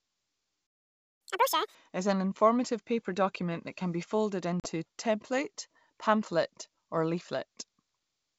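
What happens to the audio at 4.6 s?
At 4.6 s, just after "that can be folded", the call suffers packet loss on an ADPCM link: about 40 ms, likely two packets, drops to hard-edged silence until 4.67 s. Unlike a plain dropout, the resumed "a template pamphlet or" briefly returns slightly distorted, because the decoder's predictor and step size have lost sync.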